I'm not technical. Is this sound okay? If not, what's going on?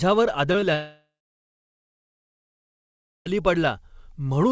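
No, not quite. Around 0.52 to 0.56 seconds and again at 0.60 to 0.64 s there's short concealed packet loss: tiny bits of the call arrived too late, so the receiver patched each gap of about 20 ms by stretching the last sound, leaving a quick smear or wobble.

Then from 0.74 to 3.28 s the audio cuts out, which sounds like a long network dropout is the likely cause. For a moment the last sound trails on as a fading buzz or hiss, then there's roughly two seconds of silence, and the sound returns with that stretch simply gone.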